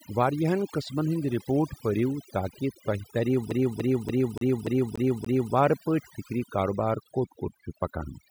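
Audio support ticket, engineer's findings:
Overdone noise removal, whole clip. Background near-silent between phrases, scattered twinkling specks. Probable component: noise reduction stage set far too aggressive. Bands close to its noise estimate are pulled down hard or gated off, taking low-level speech detail with them. Spectrogram: empty black floor dotted with isolated short bright flecks, speech harmonics ragged and patchy at their quiet edges.

CD stuck on one turn, 3.51 to 5.54 s, starting right after "پٔرِو تاكہِ تۄہہِ ترِ". Fast even stutter, the same 0.29 s segment repeating seven times with a brief mute at each jump. Probable component: CD source with a scratch sending the laser back one track per revolution. Waveform: seven identical blocks separated by thin near-flat gaps. Spectrogram: one pattern tiled at regular spacing.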